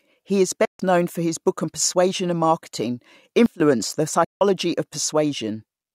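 Speech. The sound cuts to silence from 0.65 to 0.80 s and again from 4.24 to 4.41 s, with gaps of about 0.14 s and 0.16 s. The sound then resumes further on, as though it kept playing. This is likely a Bluetooth dropout, with several packets each time failing to reach the headphones. From 3.46 to 3.60 s, the level abruptly falls by about 19 dB, speech and background noise together, with no ramp. This is likely a sudden gain jump, a digital gain change applied from one sample to the next.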